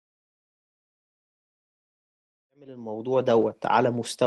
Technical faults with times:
none

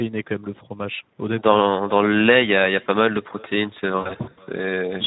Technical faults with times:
0.00-5.06 echo with no canceller
0.00-5.06 Speex codec
3.98-4.38 VoIP packet loss concealed by the speech codec

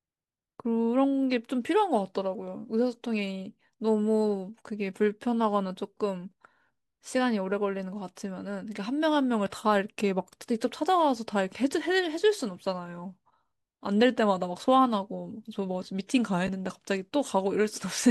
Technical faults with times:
16.47 chunks out of order

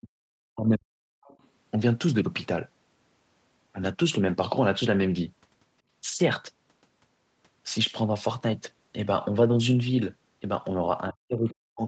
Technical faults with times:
0.00-1.29 speech suppressed in double talk
1.26-1.47 other side's voice leaking through
11.11-11.83 speech suppressed in double talk
11.48-11.54 other side's voice leaking through

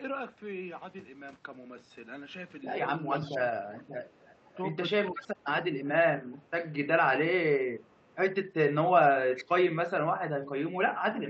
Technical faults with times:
3.14-6.48 echo leak
3.31-3.65 speech suppressed in double talk
5.14-5.45 speech suppressed in double talk
7.88-7.94 speech suppressed in double talk
7.97-8.16 echo leak
9.35-9.51 echo leak
10.71-11.14 speech suppressed in double talk

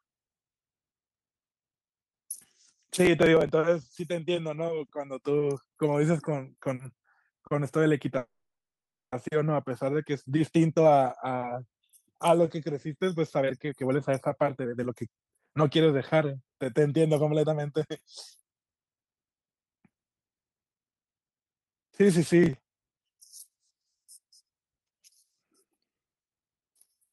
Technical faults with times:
2.96-3.49 processor overload crackle
8.17-9.14 call audio freeze
13.38-17.89 jitter buffer speed-up
22.44-22.67 processor overload crackle

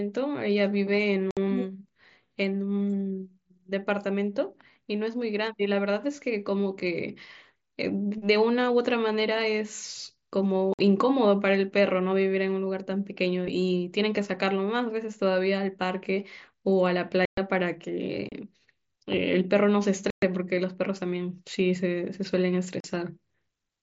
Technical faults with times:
1.31-1.37 unconcealed Bluetooth headset packet loss
10.74-10.79 unconcealed Bluetooth headset packet loss
17.25-17.38 unconcealed Bluetooth headset packet loss
18.29-18.32 unconcealed Bluetooth headset packet loss
20.10-20.23 unconcealed Bluetooth headset packet loss
22.80-22.84 unconcealed Bluetooth headset packet loss

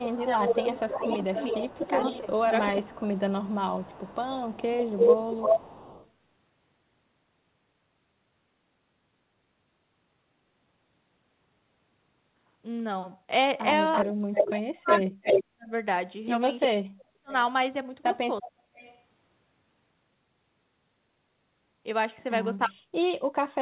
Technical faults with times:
0.00-3.44 speech suppressed in double talk
0.18-6.10 echo leak
13.93-16.67 echo leak
14.15-18.60 speech suppressed in double talk
18.42-19.02 echo leak
22.66-22.93 speech suppressed in double talk

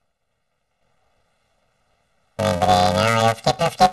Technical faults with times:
0.00-3.92 planar audio read as interleaved

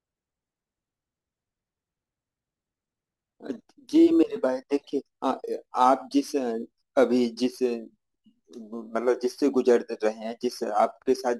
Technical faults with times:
0.00-11.39 crude rate conversion

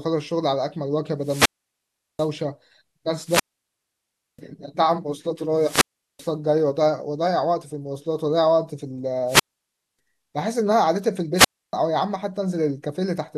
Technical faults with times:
1.20-2.31 wireless microphone squelch dropout
3.23-4.42 wireless microphone squelch dropout
5.56-6.32 wireless microphone squelch dropout
9.26-9.99 wireless microphone squelch dropout
11.35-11.73 wireless microphone squelch dropout

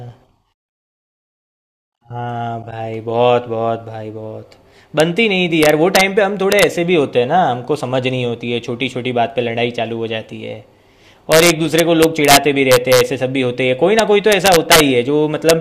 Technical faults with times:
5.00 integer overflow
5.63-6.01 integer overflow
6.52-6.63 integer overflow
11.32-13.01 integer overflow
13.99-14.80 integer overflow
15.49 integer overflow

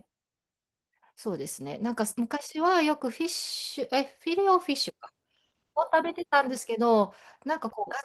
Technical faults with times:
none

